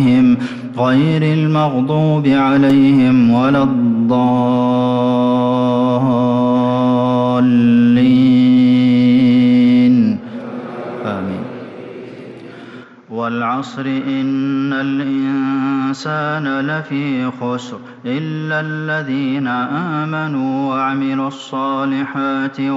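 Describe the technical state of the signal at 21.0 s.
At 21.0 s the input has likely switched to a poorer device (12.83 s to the end). Its narrower band cuts everything above 7.6 kHz, so the sound is duller and quieter, with faint new background noise. A spectrogram shows a hard ceiling at 7.6 kHz, and the waveform is slightly smaller.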